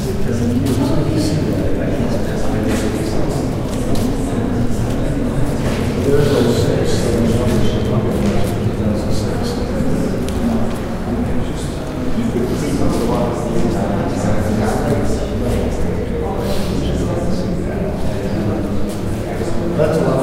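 Nothing in this recording of sounds stood out as a technical problem on listening.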